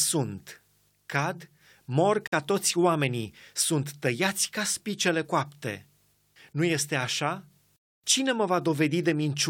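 Speech, with a gap at a join of encoded pieces. Sound stops at 2.27 s and resumes at 2.32 s, a gap of about 51 ms, just before "toți oamenii sunt". Separately encoded segments were joined untrimmed, keeping encoder delay and end padding.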